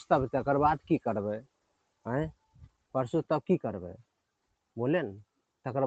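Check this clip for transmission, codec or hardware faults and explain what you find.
One processing fault runs through the whole clip, and it causes four distinct dropouts. The audio stops at 8 kHz, which fits a wideband Opus call link, but that path carries the sound without fault.

Noise suppressor applied to non-speech sound: throughout, the level swings by around 20 dB. Held and fading parts sink while onsets get through, so the sound pumps and thins. A speech-tuned suppressor is treating this steady, non-speech material as background noise and pulling it down.

Sound cut by the noise suppressor: at 1.42–2.06 s, 2.34–2.94 s, 4.02–4.76 s and 5.24–5.65 s, the sound drops by about 20 to 21 dB. In each stretch, the suppressor judged the sustained sound to be noise and attenuated it harder than its surroundings.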